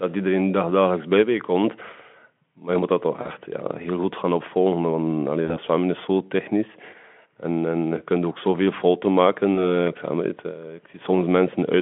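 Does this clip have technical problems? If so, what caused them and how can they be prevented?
Yes. The speech carries VoIP packet loss concealed by the speech codec at 3.21 to 3.30 s, 5.45 to 5.59 s and 9.55 to 9.76 s. Each gap sounds like roughly two, two and one 20 ms frames going missing. The Speex decoder, whose own coding damage is faint on the narrow telephone band, fills the gaps by extending the last pitch and spectral shape at falling gain, giving a brief buzzy or noisy smear that stays weak past each gap. Prevention: reduce network loss with QoS prioritisation and add forward error correction or packet redundancy.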